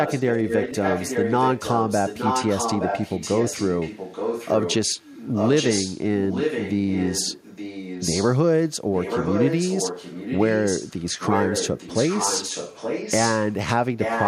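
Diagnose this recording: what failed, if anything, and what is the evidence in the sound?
Echo leak runs through nearly the whole clip, from 0.05 to 6.04 s, 6.29 to 8.39 s, 8.93 to 13.55 s and 13.99 s to the end. A delayed copy of the speech trails the original by 870 ms, only about 5 dB quieter. This is a call-processing failure, most likely a far-end echo canceller letting loudspeaker pickup through, so the talker's own speech returns nearly a second late.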